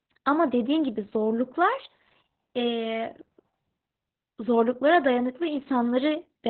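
From start to finish, Opus voice compression squeezes the speech into narrowband SILK at roughly 8 kbps. Nothing reaches above 4.2 kHz, leaving the speech muffled, hoarse and robotic, and a spectrogram shows a hard ceiling there.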